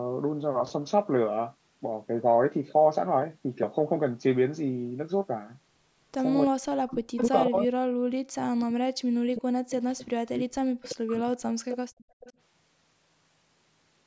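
Speech recorded over a call. Between 6.46 and 11.29 s, an echo canceller likely confused double talk with echo and clamped the line: speech suppressed in double talk, dipping by up to about 40 dB across roughly four seconds. Short echo leaks, probably from a loudspeaker pickup the canceller failed to remove, return delayed copies about 350 to 370 ms late at 7.17, 10.82, 11.69, 11.98 and 12.2 s, roughly 10 to 35 dB below the speech. From 11.97 to 12.2 s, the canceller's suppression gated the background, pulling room sound down by about 34 dB for around 150 ms.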